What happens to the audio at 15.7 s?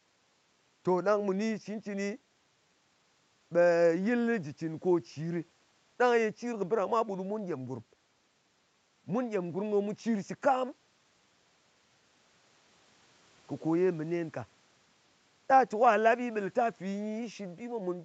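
Nothing goes wrong at 15.7 s: the speech there is intact, with only the usual bass roll-off and upper limit near 8 kHz of the call's microphone processing.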